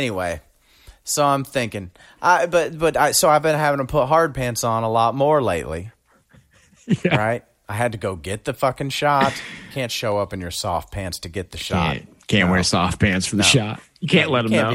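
From 1.06 s to 13.13 s, about five clicks recur every 3.02 s, just before "for the no". That strict regularity, unlike random dropouts, marks clock drift buffer slips, likely mismatched device clocks.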